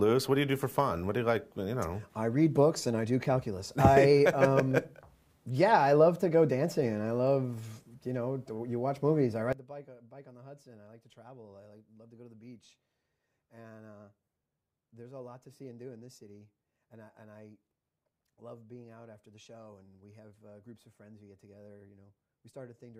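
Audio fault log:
9.53 s to end: sudden gain jump. The level drops by about 19 dB in a single step and stays down. Sound and background noise fall together, with no fade between them. This likely comes from a digital gain change applied without a ramp.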